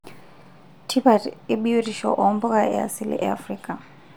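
No technical faults can be heard at any point in the speech recording.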